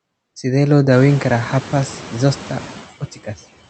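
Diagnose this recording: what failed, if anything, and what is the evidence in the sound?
Call processing: noise suppressor artifacts throughout. The steady room noise, which steps up near 1 s, is pulled down about 16 dB between phrases and swells under speech.

Speech cut by the noise suppressor, 2.92 to 3.4 s. The suppressor misread parts of speech as noise, turning them down up to about 14 dB. Roughly 150 ms sounds swallowed.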